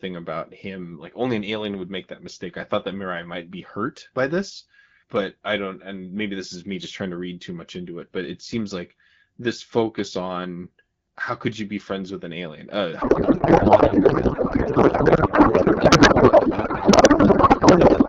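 A codec payload misread begins at 13.01 s and runs to the end at 18.08 s. The AMR-WB decoder misplaces every field, which fits octet-aligned frames being parsed as bandwidth-efficient, so the speech turns into garbled noise and warble that barely tracks it.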